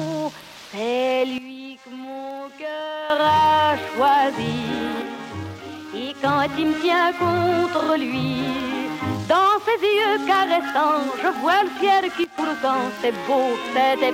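The audio drops abruptly in level three times: by about 12 dB from 1.38 to 3.1 s, by about 6 dB from 5.02 to 6.24 s, and by about 12 dB again from 12.24 to 12.38 s, each time snapping back afterwards. Sound and background noise fall together, and these are likely sudden gain jumps from a gain change applied without a ramp. A waveform would show sharp step-down and step-up edges, and a spectrogram would show abrupt uniform dimming across all frequencies.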